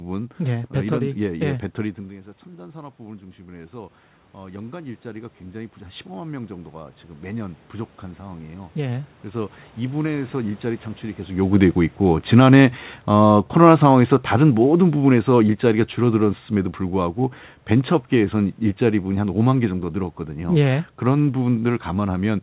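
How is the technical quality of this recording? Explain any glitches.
The recording has two gain faults from the call's automatic gain control. The audio is narrowband, with nothing above 4 kHz, which fits a G.711 mu-law call codec, and there is some room noise.

From 2.45 to 11.45 s there is automatic gain rising. Around 2 s the talker moved away from the microphone, and the input dropped by about 15 dB. The gain control treated the quieter input as a level it should correct and raised its gain by about 14 dB over roughly nine seconds. Because that gain applies to everything, the voice and the room noise swell together slowly. By the end the voice has regained most of the lost level but not all of it.

From 11.44 to 16.36 s there is automatic gain falling. Around 11 s the talker moved again. The gain control then judged the input too loud, or its background noise too strong for the raised gain, and lowered its gain by about 8 dB over roughly five seconds. 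The voice and the background sink in level together, instead of the voice simply settling at a steady level.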